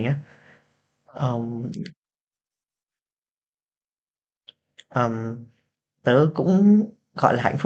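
No technical faults are audible.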